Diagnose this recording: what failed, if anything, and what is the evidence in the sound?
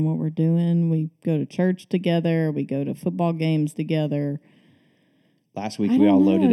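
The failure is channel delay, which produced comb filtering at the mono fold-down, after the converter or driver. One channel arrives late by roughly 0.4 ms, a few samples. The speech sounds hollow and phasey throughout, not at any one moment. Fixed notches cut the spectrum, the first near 1.5 kHz, with more at evenly spaced intervals above it. Summing the two channels cancels the shared signal wherever the delay puts them out of phase.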